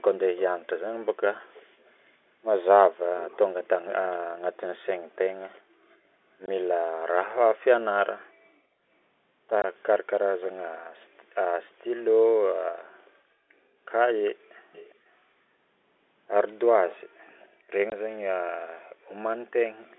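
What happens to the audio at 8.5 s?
Nothing goes wrong at 8.5 s: the speech carries on intact, with the narrow telephone band of the G.711 line and no dropout, glitch or distortion at that point.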